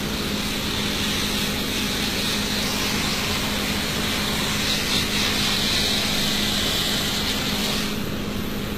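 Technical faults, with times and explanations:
Throughout, HE-AAC compression: the top end is grainy and metallic, with nothing above 14.9 kHz and plainly audible codec damage. The likely cause is HE-AAC at a low rate, which fits about 20 kbps. That codec stores only the lower band faithfully and synthesises the treble by copying lower content upward under a coarse envelope. Harmonics above the crossover fail to line up with those below, so high detail sounds gritty rather than natural.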